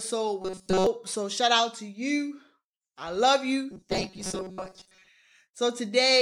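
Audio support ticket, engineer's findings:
Rigid metallic buzz at a fixed 188 Hz over the speech, 0.42–0.87 s and 3.71–5.09 s (after "to you I love"). Robotic sound from repeated short buffers: likely a receive-side underrun looping a block of about 5.3 ms, with most real audio skipped.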